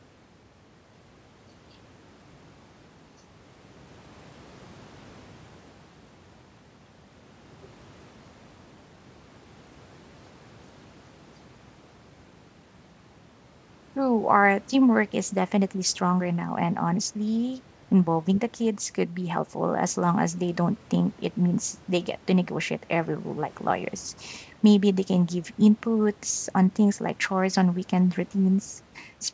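No faults detected; the speech shows only the normal signature of call microphone processing, with the lowest bass trimmed and nothing above 8 kHz.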